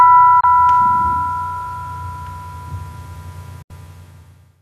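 At 0.40 to 0.44 s the sound drops out for about 24 ms, and at 3.62 to 3.71 s it goes silent again for about 72 ms: a digital broadcast dropout, where the receiver muted while frames were missing or corrupt. The 8 ms fade-out and clean return mark it apart from a click or concealment glitch, with nothing repeated or smeared. The hole lengths fit one and then three lost frames.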